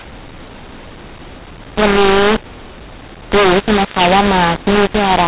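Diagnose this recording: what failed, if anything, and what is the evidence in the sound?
The failure is at the codec stage, a mu-law and A-law mix-up across the whole speech clip: harsh, distorted sound, scrambled levels, and noise filling the pauses. The 8 kHz G.711 A-law bytes are decoded with the mu-law curve, giving wrong amplitudes and lifting near-silent samples well above zero.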